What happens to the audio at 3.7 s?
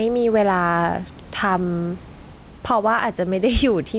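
Gain pumping runs through 3.7 s, as it does across the whole clip: the level swings by roughly 5 dB, pulling loud and soft parts closer together and squashing the sound, likely from gain set far too high with a fast limiter repeatedly clamping it down.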